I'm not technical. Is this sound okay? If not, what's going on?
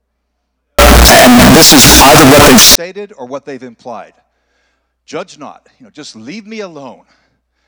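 No. From 0.79 to 2.75 s the speech turns into a loud, harsh, buzzing blast, with background noise as loud as the talking, though the pitch stays followable. This is likely a float read as integer: decimal-format audio misread as whole numbers.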